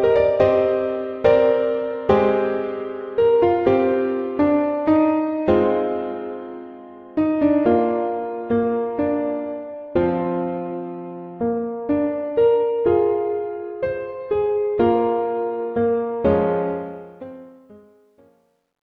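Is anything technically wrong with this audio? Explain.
Yes. Truncation distortion on the fade runs from 16.70 s to the end at 18.97 s, during the fade-out. The fade stage keeps too few bits and adds no dither, which fits a 12-bit path. As the level drops toward the smallest step, the waveform collapses into coarse square steps. The tail turns gritty, and it is worst from 17.82 s to 18.98 s.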